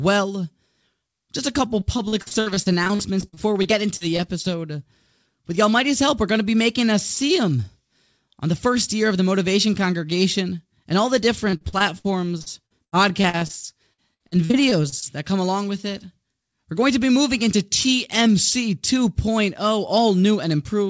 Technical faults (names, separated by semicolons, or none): repeated packet loss (robotic sound)